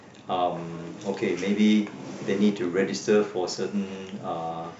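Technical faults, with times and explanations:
No technical faults can be heard in this speech recording. There is nothing in it to time or explain.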